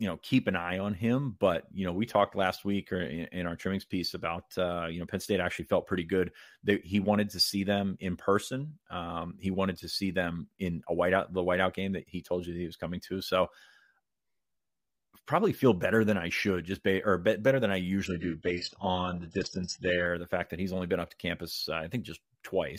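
A speech clip with one stretch where an adaptive stream dropped to a lower bitrate, from 18.06 to 20.06 s, just after "be better than i" and ending before "the fact that he's". For those 2 seconds the treble is gone and codec artefacts rise, which fits a switch from roughly 96 kbit/s AAC to a very low-rate HE-AAC stream. On a spectrogram, everything above 8 kHz vanishes abruptly, then returns just as abruptly. The waveform shows no gap at either edge.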